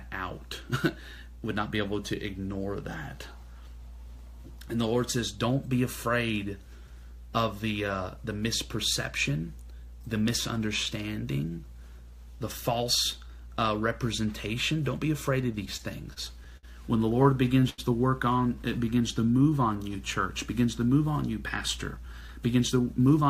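Packets reaching the receiver late, or more slowly than they were being played, repeatedly drained the jitter buffer, producing two bursts of repeated stalls (stutter) in the audio. From 15.41 to 16.65 s the buffer ran dry seven times, and the receiver bridged the waits by continuing the last sound, about 158 ms in all, the longest hold 60 ms. From 17.23 to 17.80 s five more gaps were filled, totalling 131 ms with the longest at 85 ms, so roughly a quarter of that stretch is stretched-out sound. Nothing is actually lost, but the flow drags and catches. Straight after this, with the buffer low or its target delay just raised, the receiver applied a jitter buffer slow-down from 18.55 to 20.16 s, repeating single pitch periods or slivers of pauses over and over to rebuild its reserve. It added about 150 ms, so that stretch runs at 91 percent speed with the pitch unchanged and sounds drawn out rather than lower. 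At the end the buffer held more than its target, and a jitter buffer speed-up from 21.96 to 23.29 s cut short pieces of one or a few pitch periods in quick succession to shed the excess, around 150 ms. The audio there runs at 111 percent speed, again at the same pitch, and comes across as rushed.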